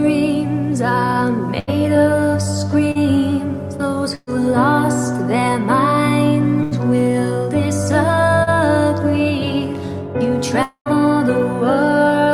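Burst of packet loss occurs three times, at 1.59 to 1.70 s, 4.15 to 4.30 s and 6.63 to 6.74 s. In each case a run of packets failed to arrive in time, so the receiver extended the last sound and let it fade: about 80 ms of fill replacing 80 ms of lost audio at the first, 119 ms replacing 120 ms at the second, which also ends in 20 ms of silence, and 83 ms replacing 80 ms at the third. Where the sound picks up again, the material in between is gone. Short concealed packet loss appears at 2.91 to 2.98 s and 8.43 to 8.50 s. Each time about 40 ms of audio never reached the decoder, and roughly 35 ms of synthesised continuation, 36 ms and then 34 ms, patches the hole before blending back into the real signal. The result is a brief smear or wobble rather than a clear gap. A long network dropout at 10.63 to 10.89 s sounds like a 230 ms stretch of fading continuation followed by 90 ms of silence, after which the audio returns with about 240 ms missing. 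The likely cause is a long interruption in the network during which no packets came through at all.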